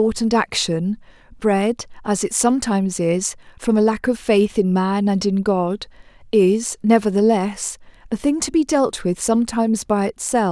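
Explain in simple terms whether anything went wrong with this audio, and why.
Nothing went wrong here.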